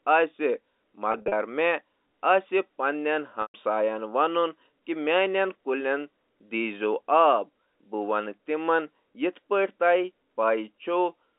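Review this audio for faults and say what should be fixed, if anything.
There's packet loss with pitch repetition in two places. From 1.12 to 1.32 s, about 120 ms goes missing in scattered gaps across 200 ms, the longest run 40 ms. The receiver loops the last pitch period over each gap, so the speech sounds briefly held and buzzy. At 3.42 to 3.54 s, a solid 120 ms drops out. That's long enough for the repeat to fade toward silence before the speech cross-fades back in. The gap sizes fit 20 ms packets. Adding redundancy or forward error correction on the line, or fixing the lossy network hop, would keep those packets from going missing.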